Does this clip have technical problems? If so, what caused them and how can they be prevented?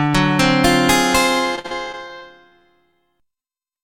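Yes, two of them. From 1.55 to 2.96 s there's repeated packet loss, the robotic sound. The stream keeps dropping out, about nine gaps in that stretch, the longest around 52 ms. Each time the receiver papers over the hole by stretching the last bit of sound it had, so roughly 15% of that span is patched rather than real. That's why it turns choppy and robotic, with chunks of the actual audio gone. A steadier network path, a wired link instead of congested Wi-Fi, plus a bit more jitter buffer or forward error correction would keep this from happening.

Right at the end, 3.75 to 3.79 s, there's a short concealed packet loss. Something like 20 ms of audio never made it to the decoder in time. The decoder filled the gap by carrying the previous sound forward, then eased back into the real signal. You hear it as a quick smear or wobble rather than a clean continuation, and the patch leaves the passage running a touch longer than it should. 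The same fixes apply here: a cleaner connection, some jitter buffering, or FEC to cover isolated drops.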